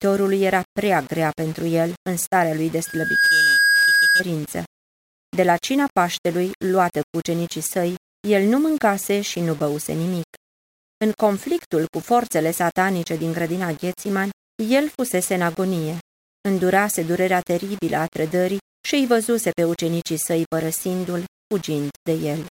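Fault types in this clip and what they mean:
Low bit depth without dither: There's a grainy, gritty distortion riding on the speech the whole way through, worst on the quiet bits. It sounds like the likely cause is audio rounded to around 6 bits with no dither, leaving error only about 25 dB under the signal.
Loudspeaker feedback squeal: From 2.84 to 4.23 s a steady 1.6 kHz tone swells up in under half a second and sits a bit louder than the speech. That's a mic hearing its own loudspeaker, with the loop gain topping one at that frequency.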